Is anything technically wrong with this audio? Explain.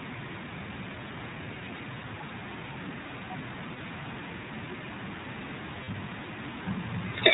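Yes. The whole clip has passed through the iLBC codec, and it has two short dropouts from lost iLBC frames.

The iLBC coding runs from start to end. It is a narrowband VoIP codec, so nothing above 4 kHz survives. The speech sounds dull and band-limited. The damage is plainly audible: a rough, slightly synthetic edge on the voice. Each frame's excitation is coded on its own, with no help from the previous frame. The texture fits the 15.2 kbps mode with 20 ms frames.

The lost iLBC frames fall at 3.74 to 3.79 s and at 5.84 to 5.89 s. Each gap lasts about 40 ms, which points to two 20 ms frames missing each time. The decoder fills the hole by repeating the last pitch cycle mixed with noise. You hear a brief held, buzzy vowel in place of the real sound. Because iLBC frames stand alone, the speech snaps back cleanly right after each gap.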